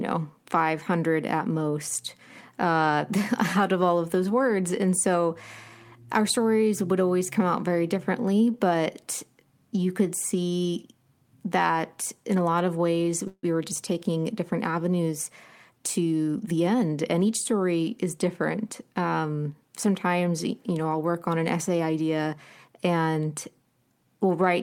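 At 13.27 s, after "a lot of ways", a call audio freeze stretches the last sound into a fading buzz or hiss lasting about 0.18 s, ending in roughly 60 ms of silence. It was likely caused by late packets emptying the jitter buffer. Speech resumes at "were just" with nothing lost.

From 15.70 to 17.02 s, between "different avenues" and "and each story is", a jitter buffer speed-up trims about 150 ms of pitch periods, so the speech runs 12% faster at unchanged pitch.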